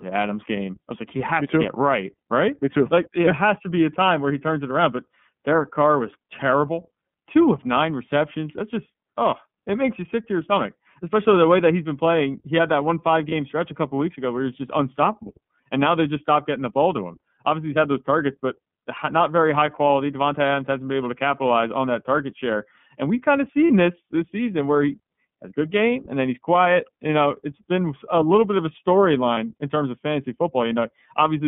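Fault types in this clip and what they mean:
iLBC codec: The whole clip passes through a narrowband line of about 150 Hz to 3.5 kHz, with a plainly audible rough, synthetic edge to the speech, which fits iLBC's 13.33 kbps mode. The synthetic texture, not just the dull band, sets it apart from plain telephone filtering.
Lost iLBC frames: Three single 30 ms gaps, after "had that one five", after "we've kind of", and just before "in terms of fantasy", are each filled by a repeated pitch cycle mixed with noise, heard as a brief held buzzy or breathy vowel. Unlike a dropout, there's no silence, and the speech recovers at once.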